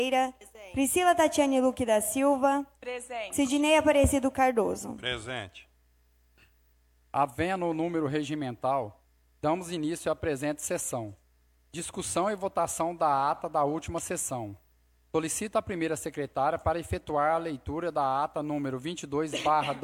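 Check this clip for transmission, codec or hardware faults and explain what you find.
Nothing stood out on listening to the clip.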